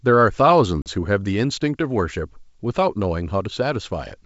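Packet loss on an ADPCM call strikes at 0.82 s and lasts to 0.89 s: about 40 ms, a couple of packets, drops to silence with hard edges. The decoder's predictor and step size lose track of the sender's, so the speech returns with mild distortion before settling.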